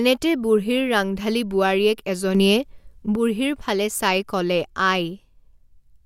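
At 2.35 s the speech abruptly gets louder, by about 6 dB, and the background noise steps up with it in the same instant. The raised level holds until 3.16 s, where everything drops back just as suddenly. This is a sudden gain jump: the likely cause is a digital gain setting, or a bit shift, applied between one sample and the next with no ramp, so the signal and its noise floor move together in a single step.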